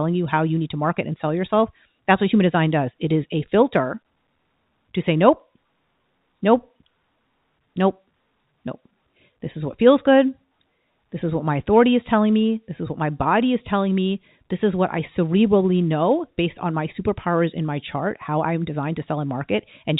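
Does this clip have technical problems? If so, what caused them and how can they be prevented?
No, no technical faults.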